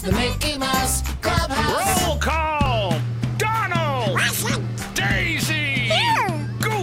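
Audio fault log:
2.66 s, dropped buffer (overrun): an abrupt forward jump in the sound, no gap of silence between the two sides. Roughly 20 ms of audio is missing, and the material before and after is butted together directly. The likely cause is the capture software failing to read its buffer before the hardware overwrote it, discarding that block.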